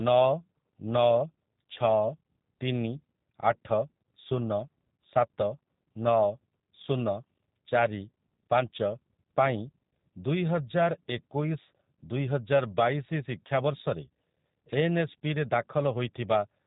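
From start to end, the speech carries G.729 codec damage: a rough, faintly synthetic buzz from speech rebuilt out of pitch and pulse models, consistent with 8 kbit/s coding. Nothing passes above 3.8 kHz, but unlike plain band-limiting, the voice itself sounds modelled, not merely muffled.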